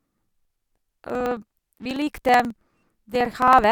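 From 0.07 s to 3.64 s the speech is broken by periodic USB or driver dropouts: every 54 ms something stalls the audio path and roughly 10 ms of signal is skipped outright, so the waveform jumps straight from one point to a later one. About seventy such splices produce a steady ticking buzz, near 18 per second, riding on the speech and vanishing in pauses. A spectrogram shows evenly spaced thin vertical broadband lines; the waveform shows abrupt discontinuities.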